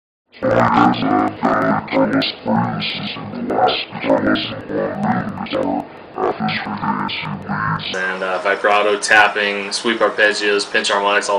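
From the start to 7.97 s the sound drops an octave, doubled and choppy, stuttering at about 11.7 Hz. This is interleaved audio read as planar: each 85 ms block, which fits a 4096-sample buffer, has its alternating samples split into halves played together at half speed.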